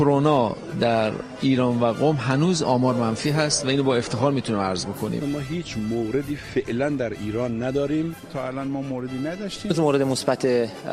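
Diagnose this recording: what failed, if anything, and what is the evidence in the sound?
Nothing failed; no fault is audible in this recording.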